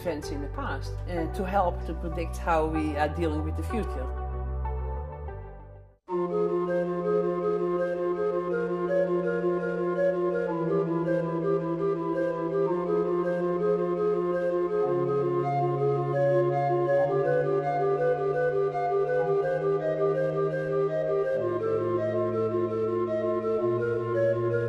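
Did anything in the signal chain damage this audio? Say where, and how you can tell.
No, nothing in the chain audibly damaged this audio.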